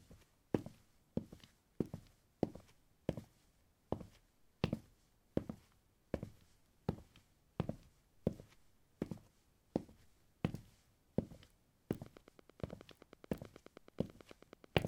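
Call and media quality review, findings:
Train of clicks, 12.06–14.76 s: steady ticking over the sound, about 9.3 clicks/s at even spacing, roughly thirty pulses of matching shape, peaking about 5 dB above the audio. Likely cause: interference from nearby equipment or a struggling interface injecting periodic pulses.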